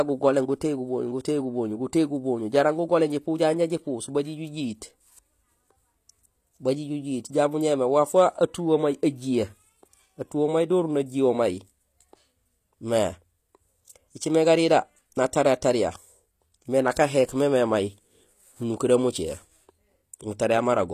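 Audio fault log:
throughout: HE-AAC compression is the likely cause of plainly audible damage. The speech's treble sounds rebuilt from lower bands under a coarse envelope rather than coded, so s sounds turn gritty and lispy. Nothing remains above 14.9 kHz, which fits a bitrate near 24 kbps.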